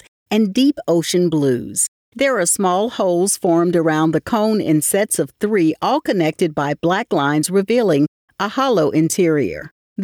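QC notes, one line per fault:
No faults were found, so these QC notes come to a single line.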